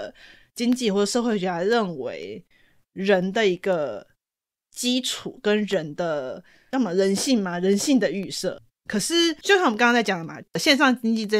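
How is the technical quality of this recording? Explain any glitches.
The recording has one fault: periodic USB or driver dropouts. From 0.23 s to 11.24 s, a tiny sliver of the speech, well under a millisecond, drops to silence every 0.5 s. A background task stalls the audio path on a fixed schedule. Each gap is heard as a small, regular tick during the speech.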